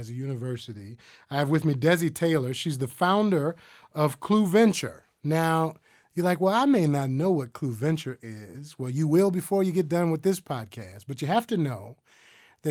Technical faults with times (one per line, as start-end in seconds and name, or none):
none